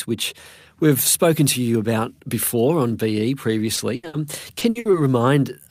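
At 3.75 to 3.79 s, short concealed packet loss: about 20 ms of speech never arrived, and the receiver extended the preceding sound, leaving a brief smear.

Two bursts of packet loss follow, at 3.95 to 4.05 s and 4.07 to 4.15 s. The decoder fills 80 ms and then 60 ms with a fading continuation, and the speech resumes with that material missing.

From 4.59 to 4.95 s, repeated packet loss gives a choppy, robotic sound. Four gaps, the longest 60 ms, are concealed one after another, covering about 44% of that stretch.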